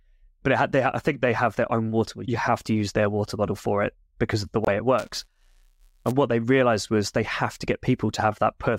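At 4.65 s, right after "it because of the", a corrupt frame muted fault cuts the speech off dead for about 38 ms, until 4.68 s. Damaged compressed data was rejected by the decoder, and silence was substituted for what fits two lost frames of roughly 19 ms each. On the waveform this is a flat gap with sheer edges. On a spectrogram it is a clean vertical blank band across all frequencies. Timing continues unshifted afterwards.

From 4.98 s to 6.11 s, ending just before "what they realized was", buffer tearing gives the speech a steady robotic rattle at 188 Hz. The writer and reader of the playback ring buffer have drifted, so they cross inside every period, which points to a 256-sample buffer. In each period a small sliver of audio about a hundredth of a second old is spliced in, with hard joins on both sides. The waveform shows regular discontinuities every 5.3 ms. The spectrogram shows fine vertical striations and a comb of harmonics spaced at 188 Hz wherever speech is present.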